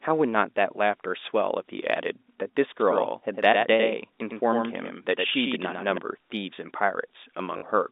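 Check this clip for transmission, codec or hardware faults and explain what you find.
Two faults are audible, heard through a normal telephone-band line.

From 2.80 to 5.98 s there is a doubled audio track: a second, roughly 5 dB quieter copy trails by about a tenth of a second, likely from a slower capture path, starting and stopping abruptly.

From 7.58 to 7.62 s, packet loss with the last packet repeated fills a 40 ms gap, which fits two 20 ms packets, producing a brief robotic stutter.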